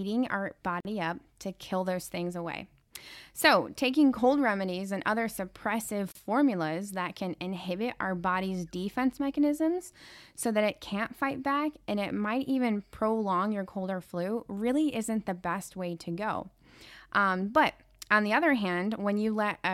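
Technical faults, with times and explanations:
0.80–0.85 s and 6.12–6.15 s, gap at a join of encoded pieces: speech stops for about 46 ms just before "up to kill those", then for about 34 ms just after "remedies and other suppressive". Each break is silence left in where separately encoded pieces were joined untrimmed: encoder start-up delay plus final-frame padding. Unlike a dropout, nothing is lost; speech resumes exactly where it stopped, and the codec blurs the edges rather than leaving hard cuts.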